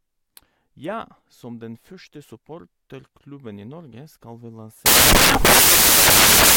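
From 4.86 s to the end, samples built from the wrong bytes let the low bits dominate, producing loud, harsh broadband noise and an evenly filled spectrogram.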